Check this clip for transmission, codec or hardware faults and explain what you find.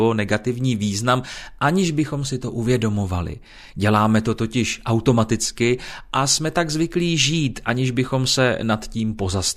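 I find no faults to report in this clip.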